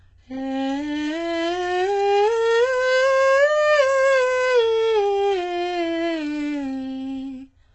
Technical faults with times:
0.00-7.74 HE-AAC compression

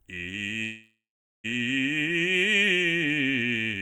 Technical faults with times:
0.63-1.46 call audio freeze

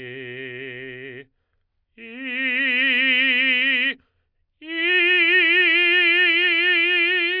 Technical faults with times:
none

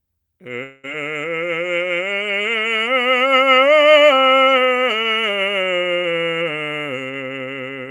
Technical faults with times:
0.63-0.85 long network dropout

